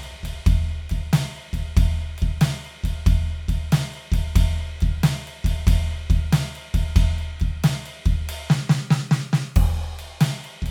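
No technical faults are audible.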